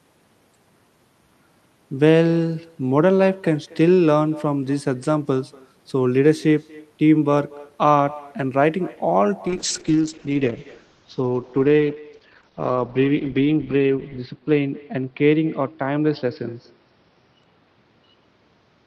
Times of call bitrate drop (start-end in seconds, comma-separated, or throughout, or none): 9.49-18.87